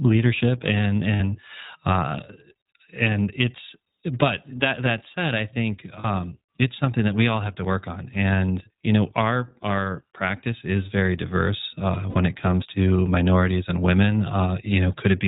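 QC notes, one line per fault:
Throughout, iLBC codec: narrowband coding is plainly audible. Nothing above 4 kHz passes. Speech sounds slightly rough and synthetic, which fits iLBC's 20 ms frame mode at 15.2 kbps.
1.14–1.22 s, 6.00–6.06 s and 12.10–12.17 s, lost iLBC frames: gaps of 60, 40 and 60 ms become a held, buzzy vowel. The decoder repeats the last pitch cycle with noise. Speech recovers almost immediately.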